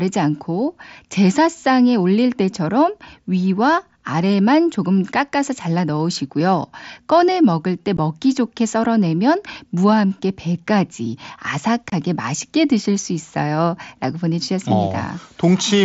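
At 7.97 s the speech drops out for about 15 ms, and at 11.90 to 11.92 s for about 22 ms. These are unconcealed Bluetooth headset packet loss: audio packets between headset and phone never arrived, and nothing was filled in. The gap lengths point to two and then three missing 7.5 ms mSBC frames on the wideband link. Concealed loss would bridge the hole with repeated or faded sound. Here the gaps are abrupt, hard-edged holes.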